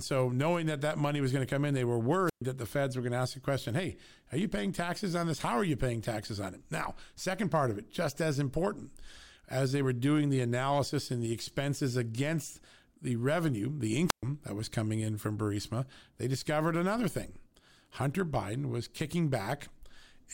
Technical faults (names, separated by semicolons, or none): wireless microphone squelch dropout